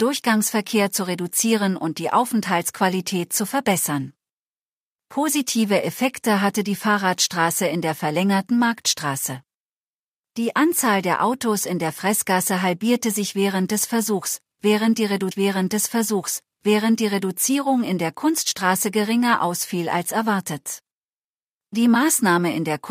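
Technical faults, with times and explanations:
15.31 to 17.33 s: stream segment repeated. About 2.0 s of the speech plays a second time. The player fetched or queued the same stretch of the stream twice. So the programme jumps back and repeats, and a small blip marks the point where it restarts.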